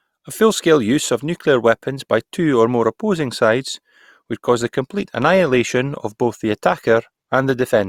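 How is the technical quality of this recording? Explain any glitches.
The recording has one glitch, a mid-clip drop in quality. From 3.78 s, just after "or more opposing sides", the adaptive stream switched to a lower bitrate, which fits a slowed connection forcing a step from roughly 64 to 32 kbit/s Opus. The quality suddenly drops as codec artefacts rise, and this lasts to the end, with no gap at the switch.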